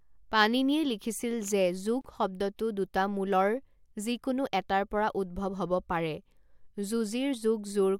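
At 2.01 s, after "পাণিনিয়ে লিখিছিল যে", untrimmed encoder padding leaves a 33 ms gap at a join of encoded pieces: a brief dropout, seen as a blank spectrogram stripe.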